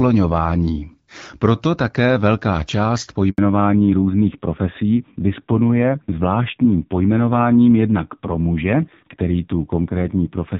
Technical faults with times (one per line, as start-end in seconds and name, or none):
3.30-3.38 handover gap
3.38-10.60 fallback to narrowband